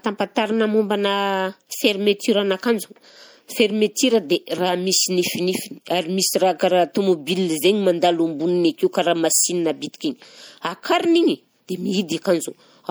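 From start to finish the speech has a watery, swirly quality, with chirpy, metallic edges on s sounds and softened consonant attacks. That's likely MP3 compression, something around 64 kbps, starving the encoder so treble is cut and weak frequency lines flicker between frames.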